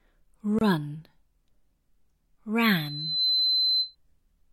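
A short silence of about 26 ms cuts into the continuous sound from 0.59 to 0.61 s, with smeared edges, before the audio resumes where it left off. This is a gap at a join of encoded pieces, where separately encoded sections were spliced without trimming the encoder's start delay and end padding. From 2.75 to 3.96 s a single tone at 4.1 kHz swells over roughly half a second until it sits at about the same level as the rest of the sound. This is a loudspeaker feedback squeal: a microphone picked up the loudspeaker it was feeding, and at that frequency the loop gain exceeded one, so the tone kept growing.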